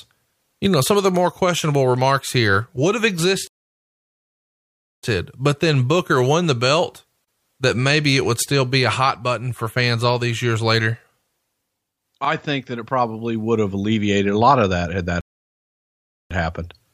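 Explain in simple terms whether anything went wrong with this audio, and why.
Playback stalls at 3.47 to 5.03 seconds and 15.21 to 16.31 seconds. The speech cuts out in mid-flow after "remarks here would have" for about 1.6 seconds, then picks up with "but then". Later it goes silent after "of that had that" for about 1.1 seconds. The likely cause is that the player ran short of audio data, or was held up, and stayed quiet until it could continue.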